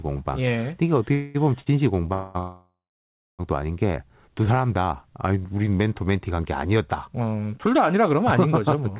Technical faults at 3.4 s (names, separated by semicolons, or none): call audio freeze